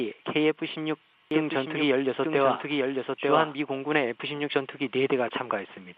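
From 1.31 to 3.55 s, a doubled audio track appears. A second copy runs about a second behind, around 5 dB quieter. It has no decay or room colour. It starts and stops abruptly. A slower capture path or an out-of-step edit is the likely cause.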